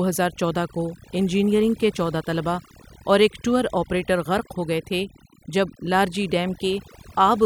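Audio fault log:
Throughout: overdone noise removal. The background drops and breaks up into twinkling specks. A noise reducer set too aggressively is cutting individual frequency bands whenever they sit near its noise estimate, taking the quieter parts of the speech with them.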